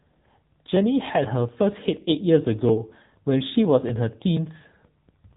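Throughout, the speech has passed through the AMR narrowband mobile codec at a low rate near 8 kbps, so nothing above 3.8 kHz survives and voices sound plainly buzzy and synthetic.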